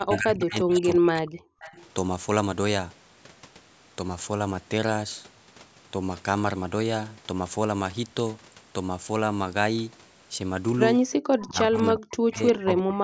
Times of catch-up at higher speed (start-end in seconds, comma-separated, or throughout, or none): none